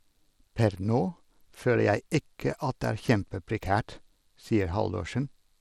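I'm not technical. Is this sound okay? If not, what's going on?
No. Throughout the speech there is a gritty edge and unsteady treble, most likely from Bluetooth SBC compression squeezing the sound too hard for wireless transfer.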